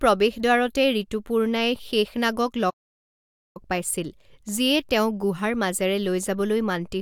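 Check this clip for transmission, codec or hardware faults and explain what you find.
One fault is present, a playback stall. From 2.70 to 3.57 s, after "প্ৰৱেশদ্বাৰতে ঋতুপূৰ্ণাই শেশনাগক", the speech stops for about 0.85 s, likely because the player ran short of data, then resumes.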